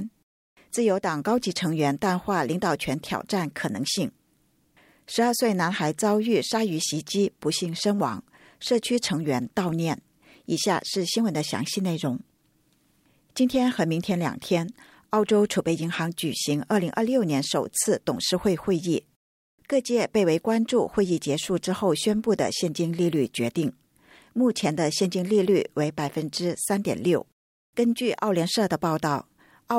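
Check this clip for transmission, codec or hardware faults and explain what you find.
Nothing stood out on listening to this clip.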